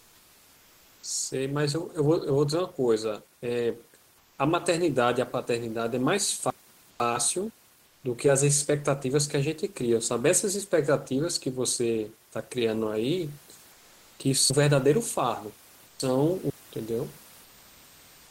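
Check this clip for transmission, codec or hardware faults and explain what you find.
Two faults are present: comfort noise replacing the background in the pauses, and chunks of speech played out of order.

Comfort noise in place of the background, at 0.0–1.03, 4.18–4.38, 6.90–6.99, 7.86–8.03, 13.72–14.19, 15.86–15.99 and 17.44–18.31 s, is likely discontinuous transmission. The room's background becomes flat synthetic noise about 2 dB quieter.

Chunks out of order occur between 6.5 and 7.5 s, where a 500 ms chunk plays one slot late, and between 14.5 and 16.5 s, where one plays three slots late. Each produces hard joins and jumbled speech.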